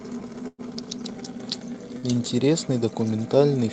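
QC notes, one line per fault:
0.47–0.61 s, burst of packet loss: about 110 ms of concealment stretches the last sound and fades it out, then 20 ms of silence, and 80 ms of speech is gone. The playout also shifts by 29 ms. On the spectrogram, the smeared, continued sound darkens to a blank strip before speech resumes abruptly.
1.98–2.06 s, burst of packet loss: a shorter burst, where 47 ms of concealed, decaying repetition covers a 40 ms hole in the speech. On the waveform, a brief repeating, shrinking segment ends in a hard jump where the signal picks up further on.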